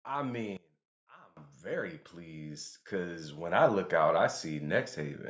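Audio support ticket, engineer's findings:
Level collapse 0.57–1.37 s, speech dropping by about 24 dB to a faint residue. Likely cause: one channel inverted, so centred content cancels on mono fold-down. Waveform: abrupt envelope notch. Spectrogram: energy gone across bands for that span, only a faint residue remaining.

Automatic gain rising 1.61–5.24 s: speech and background floor swell together by about 12 dB. AGC stage lifting gain slowly after judging input too quiet. Waveform: steady amplitude ramp across the span. Spectrogram: all bands brightening together, noise floor included. Band-limited to 8 kHz from call microphone processing, visible as an empty region above that line.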